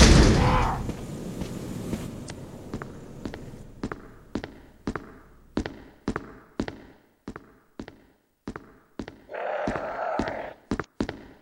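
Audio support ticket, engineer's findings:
Damaged data in a compressed stream, two events: 2.26 to 2.30 s and 10.80 to 10.85 s, each about 40 ms. Symptom: short chirp or blip breaking into the sound. Probable component: decoder input, meaning the corrupted file or stream bytes. Mechanism: the decoder hits bad frame data, misreads or drops it, loses sync and scans for the next valid frame header. The brief garbled output is heard during that resync.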